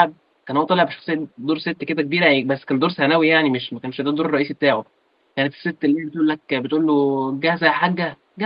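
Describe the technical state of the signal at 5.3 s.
At 5.3 s the speech comes through intact, with only the faint room noise well below it and the ordinary coding character of the call path.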